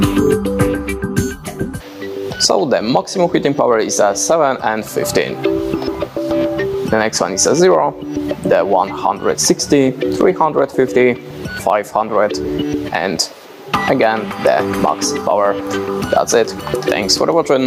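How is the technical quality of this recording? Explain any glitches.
Technical quality is compromised by gain pumping, present throughout the recording. The likely cause is input gain set far too high for the microphone, with a fast limiter or compressor clamping down on every loud sound and releasing in between. The level swings by around 15 dB as a result. Loud and quiet passages sit unnaturally close together, leaving the whole recording squashed.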